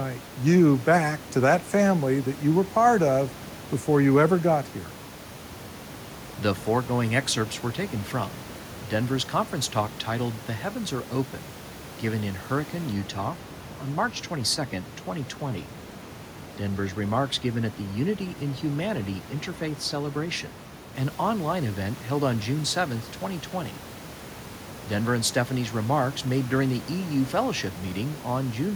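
A speech recording with room noise sitting roughly 20 dB below the voice, marred by overdone noise removal from 12.93 to 20.95 s, ending just before "an online event held". The suppression is set so aggressively that bands near the noise floor are gated away along with softer parts of the voice, leaving a lowered background dotted with twinkling specks. A spectrogram shows scattered isolated dots and ragged, hollowed speech harmonics there.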